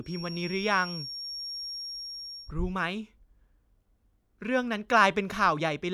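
From the start to about 2.54 s there's a feedback whistle, a thin steady tone at 5.6 kHz sitting roughly 10 dB under the speech and swelling and fading slowly. It's likely a speaker-to-mic loop hovering right at the edge of feedback without running away.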